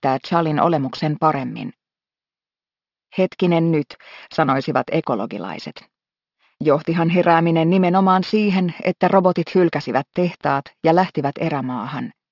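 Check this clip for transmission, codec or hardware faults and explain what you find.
Aliasing is present for the whole clip. Energy above the 6 kHz fold point was never filtered before downsampling, which fits a drop to 12 kHz. It reflects back as unrelated gritty tones about 25 dB below the sound.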